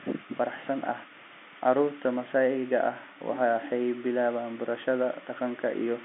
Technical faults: none

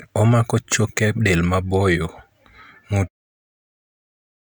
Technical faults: none

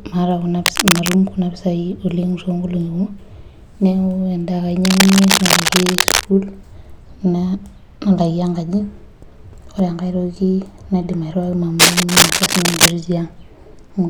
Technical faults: cable scratch noise

